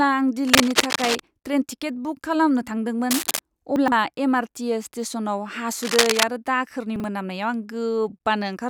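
From 0.47 to 1.20 s, just before "ट्रेन टिकेट बुक खालामनो", a dense, uneven scratching and rustling sits over the speech at roughly the same level as the voice. This is cable scratch noise, likely from a worn cable, connector or control being moved so that its contact resistance jumps about rapidly. The same scratching returns from 3.11 to 3.39 s and again from 5.82 to 6.23 s, just before "आरो दाखोरनि".

Between 3.76 and 3.92 s the speech briefly sounds jumbled. This is chunks out of order: a 40 ms chunk of audio plays three chunks later than it should. No audio is lost, but the sequence is wrong, leaving hard joins in the audio. A shorter instance follows from 6.96 to 7.04 s, right after "आरो दाखोरनि", where a 40 ms chunk arrives one position late.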